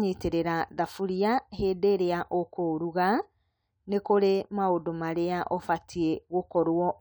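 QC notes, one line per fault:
No faults are heard anywhere in the speech. Nothing in the audio calls for a QC entry.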